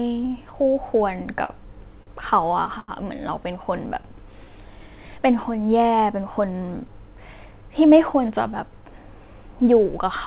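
At 1.45 s, 2.03 s and 2.80 s the speech briefly sticks: a sound is held too long with a faint buzz or dip, about 41 ms at the first two points and 82 ms at the third, before carrying on with nothing skipped. These are short stalls from a late packet. Each time the jitter buffer ran dry, the receiver stretched the last audio until the packet arrived and then resumed from the same point, adding the held time to the delay.

From 3.99 to 4.63 s the speech drags slightly, running at about 94% speed with the pitch unchanged, so sounds come out drawn out. This is a jitter buffer slow-down. With its reserve low, the receiver repeatedly duplicated single pitch periods and slivers of pauses, adding 43 ms in total to build the buffer back up.

Between 6.64 and 8.29 s the speech sounds a little hurried, at about 105% speed and the same pitch. This is a jitter buffer speed-up. The buffer was holding more than its target, so the receiver cut out short pitch-period pieces over and over, removing roughly a tenth of a second to bring the delay down. 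Throughout, the call path carries G.711 mu-law, which fits a 64 kbps stream and leaves nothing above 4 kHz.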